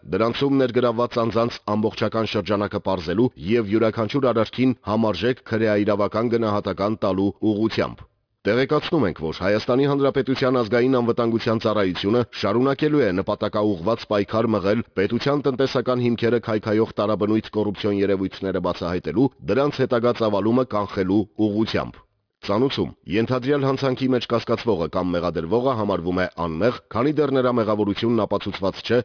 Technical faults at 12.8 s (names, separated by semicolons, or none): aliasing